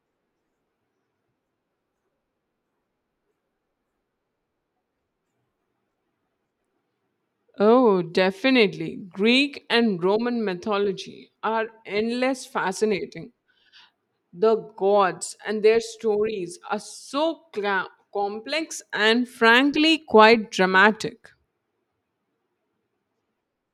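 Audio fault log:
No audible faults were found in this speech recording.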